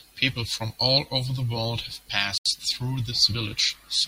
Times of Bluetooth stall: 2.38-2.46

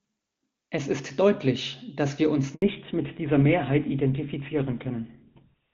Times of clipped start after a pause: none

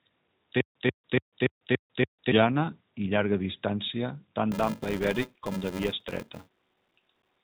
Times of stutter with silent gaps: 0.61-2.32

